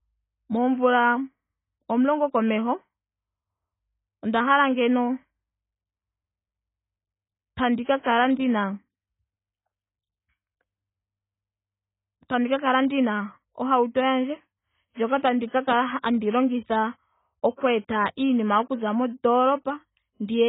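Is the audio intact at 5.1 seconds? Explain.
No. At 5.1 seconds, as throughout, the speech carries AAC compression damage, likely from AAC-LC at a very low bitrate around 16 kbps. With bits scarce, the encoder discards everything above about 3.8 kHz and coarsely quantises what remains, leaving the sound dull, smeared and warbling.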